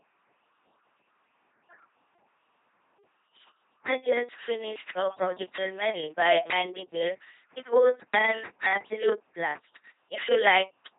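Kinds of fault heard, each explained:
LPC-10 vocoder, throughout: the speech is rebuilt from a ten-pole vocal tract filter driven by either a pulse train or noise, so each moment is forced to be voiced or unvoiced. This gives a heavily buzzing, robotic sound with nothing above 3.8 kHz, which fits a 2.4 kbit/s coder.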